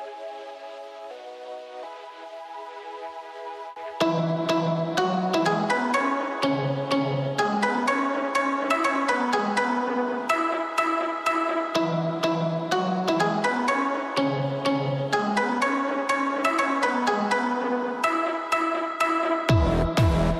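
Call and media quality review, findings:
No faults found in this clip. Nothing here calls for a follow-up on the ticket.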